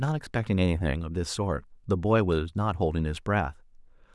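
Speech recording; no technical faults found.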